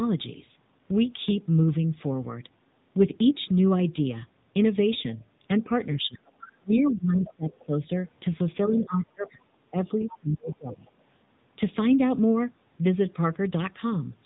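Throughout, the speech carries the AMR narrowband mobile codec at 7.95 kbps: nothing above 3.8 kHz, and a plainly audible buzzy, synthetic texture from the low-rate pulse model.

From 5.63 to 7.74 s the speech dips in pieces by up to about 25 dB, around a second in total. This is likely speech suppressed in double talk, with the echo canceller turning down the near talker along with loudspeaker echo.

Between 6.4 and 7.33 s a second voice sits about 20 dB under the speech, likely the other side's voice leaking through past the echo canceller.

The same pattern returns from 8.65 to 10.84 s, with roughly 1.5 s of likely suppressed speech, again dipping by up to about 25 dB. Likely leaked far-side voice appears at 8.68 to 9.3 s and 10.0 to 10.91 s, both about 20 dB down.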